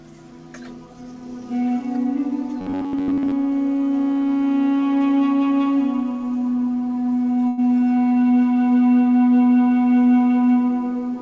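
From 2.61 to 3.34 s the sound turns into a rigid, metallic buzz near 94 Hz. This is robotic sound from repeated short buffers, likely caused by most of that stretch being refilled with copies of a segment about 11 ms long. At 7.48 to 7.60 s a sound hangs for about 98 ms. This is a short stall from a late packet: the jitter buffer ran dry and held the last sound until the packet arrived, so nothing was lost. Throughout, the call path's G.722 coding leaves nothing above 8 kHz.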